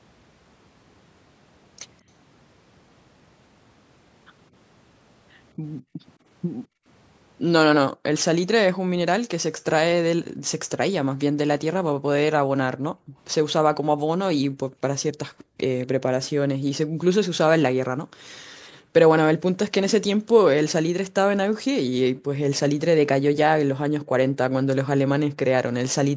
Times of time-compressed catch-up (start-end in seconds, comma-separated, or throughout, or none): none